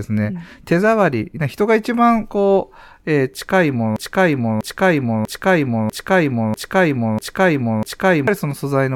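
A broken-record loop runs from 3.96 s to 8.28 s in this speech: a fragment about 0.64 s long repeats exactly, back to back, seven times, so the same sliver of sound stutters for over four seconds. This is likely a player, encoder or stream that stalled and kept re-sending the last piece it still held in memory. Whatever speech belonged in that span never plays; it is simply gone.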